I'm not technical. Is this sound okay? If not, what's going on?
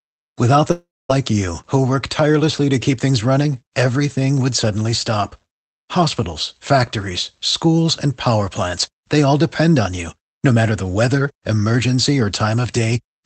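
No. Between about 0.71 and 1.11 seconds the speech breaks up. The last bit of sound is stretched into a fading buzz, then there is near silence for about a quarter of a second. When the speech comes back, roughly 0.38 seconds of it is simply gone. This is a long network dropout. The likely cause is that the connection stopped delivering audio for a moment on this call, so that piece never arrived.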